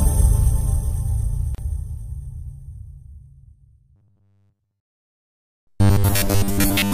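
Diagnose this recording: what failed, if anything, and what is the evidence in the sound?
Codec stage: a gap at a join of encoded pieces, with 34 ms of silence at 1.55 s caused by untrimmed encoder delay and end padding.

Driver or buffer stage: robotic sound from repeated short buffers from 3.96 to 6.93 s, a rigid 100 Hz buzz, likely a 10 ms block replayed over most of that stretch.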